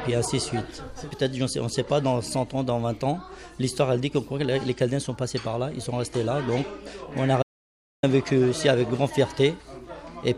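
The input feed to the recorder was likely interrupted for a moment, by a lost connection or a brief mute, while the recording kept running and filled the gap with silence. The result is an audio dropout to silence from 7.43 to 8.03 s. The sound stops abruptly mid-flow, leaving about 605 ms of total silence with no background or room tone at all, then cuts straight back in. Whatever occurred in that interval is missing.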